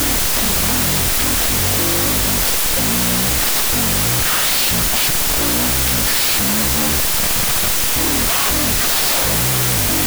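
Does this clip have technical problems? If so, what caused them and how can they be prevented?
Yes. Throughout the clip, loud, harsh noise dominates, with the speech buried beneath it and dragged to half speed and an octave low. This is a wrong sample width fault: audio written as 32-bit float was read back as 16-bit integers. Each 4-byte float sample was split into two integer values, doubling the sample count and halving the playback speed. Only the halves carrying the sign and exponent still loosely follow the waveform. The rest become noise. Preventing it means declaring the sample format explicitly in the file header or stream metadata and having the reader honour it rather than assume 16-bit.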